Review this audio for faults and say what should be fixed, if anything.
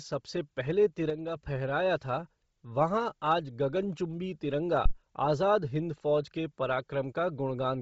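Throughout the speech there is a grainy, breathy edge and nothing above 7.7 kHz, with heavy damage that points to Bluetooth LC3 compression at a low bitrate near 24 kbps, likely with 7.5 ms frames. On a spectrogram, the top band is flat-cut at 7.7 kHz, with speckled, noise-filled patches below it. Carry the audio over a wired or higher-bitrate link.

From 1.1 to 1.36 s, speech and background noise drop together by about 5 dB, a sudden gain jump likely caused by a gain setting applied without a ramp. The waveform envelope steps down abruptly at 1.1 s and back up at 1.36 s. Apply gain changes with a short fade.

From 4.86 to 4.93 s there is a deep phantom power thump, a supply step passing through the input coupling capacitors and dying away in about 18 ms. The waveform shows a single low, lopsided swing, and the spectrogram shows a brief dark smear at the bottom. Mute the input before switching phantom power.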